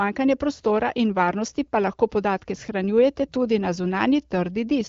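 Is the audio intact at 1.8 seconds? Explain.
Yes, the audio is intact at 1.8 seconds, with no fault at that moment.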